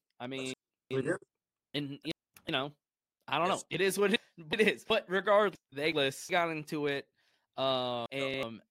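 At 0.54 to 1.24 s, 1.74 to 2.49 s (just before "know I don't know"), 4.16 to 4.90 s (right after "is what"), 5.55 to 6.30 s (before "got into it") and 8.06 s to the end, you get frames out of order. Two neighbouring blocks of roughly 0.37 s each, which fits runs of four frames, got decoded swapped. Each stretch plays back-to-front by halves as a garbled flutter, and no time goes missing.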